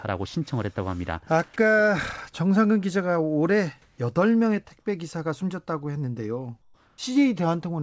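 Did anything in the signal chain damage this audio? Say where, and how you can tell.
Yes, at the call-processing stage. Comfort noise replaces the background at 3.82–3.98 s and 6.62–6.98 s. It is steady, featureless and about 2 dB quieter. The likely cause is discontinuous transmission.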